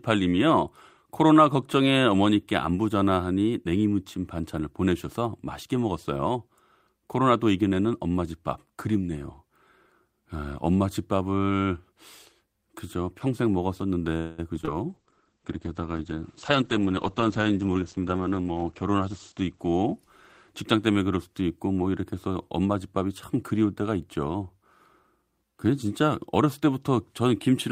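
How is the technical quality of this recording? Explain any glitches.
The speech has a cluster of call-transport glitches starting around 14 s. The sound stalls, then breaks up, then turns muffled and briefly hurried.

Call audio freeze, 14.17 to 14.40 s. The speech stops advancing for about 0.21 s. The last sound is stretched into a fading buzz or hiss, then speech resumes where it left off. Late packets likely emptied the jitter buffer. Nothing is lost, but a gap is inserted.

Short concealed packet loss, at 14.56 s, from 14.61 to 14.75 s, and 14.65 to 14.69 s. Each event loses about 20 ms of audio. The receiver patches each hole by extending the preceding sound, then blends back. Each sounds like a quick smear or wobble.

Call bitrate drop, 14.89 to 21.42 s. The encoder falls from 32 to 9 kbps and stays at the lowest rate for about 3.9 s. Bandwidth shrinks from 20 kHz to 8 kHz. The speech turns muffled and rough, with a watery edge.

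Jitter buffer speed-up, 16.5 to 18.13 s. The buffer had built up extra delay. The receiver trims tiny pitch-period slices repeatedly, removing roughly a fifth of a second. Speech runs at 112 percent speed with unchanged pitch and sounds rushed.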